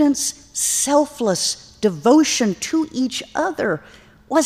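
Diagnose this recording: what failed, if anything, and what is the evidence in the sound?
Nothing failed; no faults detected.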